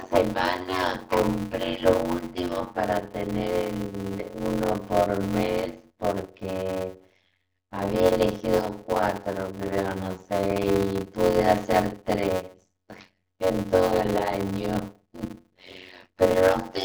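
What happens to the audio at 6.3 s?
At 6.3 s you're hearing the block size mismatch (padded) that runs through the whole clip: short writes, which fits 256-sample blocks, get zero-filled, causing a 91.9 Hz buzz and speech slowed to 0.533x with the timbre kept.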